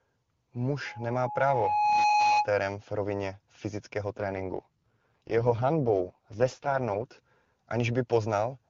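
A loudspeaker feedback squeal runs from 0.86 to 2.50 s. A microphone is picking up the loudspeaker it drives, and at 839 Hz the loop's gain tops one, so that single tone feeds on itself. It swells over about a second into a steady squeal sitting roughly 5 dB above the speech, then ends at 2.50 s.

An AMR rate drop follows from 4.17 to 7.06 s. The speech, clear beforehand on the AMR-WB HD Voice path, turns rough, buzzy and synthetic without any gap or loss of bandwidth. The rasp fits the codec falling from its top 23.85 kbit/s mode to its lowest, 6.6 kbit/s, as a weak radio link forces bits toward error protection. Clarity returns at 7.06 s when the rate climbs back.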